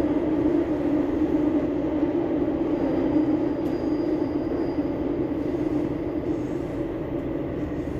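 No technical faults are audible.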